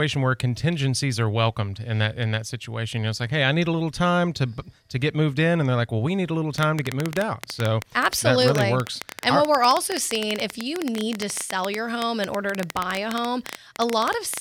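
Right after "we need a little", at 6.58 s, a train of clicks starts. About eleven uneven pops per second, roughly 15 dB above the speech, run to 14.38 s. Interference is the likely cause.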